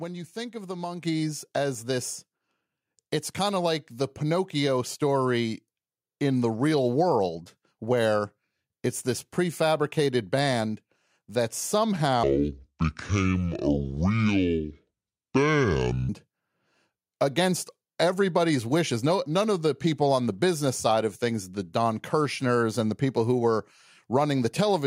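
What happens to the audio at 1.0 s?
At 1.02 s the microphone volume stepped up: the call software judged the input too quiet and raised the device gain in one step, by about 7 dB. Speech and background noise jump louder together, seen as an abrupt envelope rise on the waveform and a brighter band across the spectrogram.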